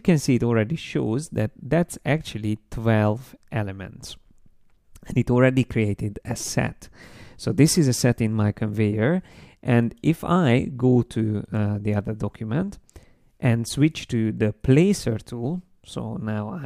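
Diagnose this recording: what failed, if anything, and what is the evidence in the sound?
Nothing failed here.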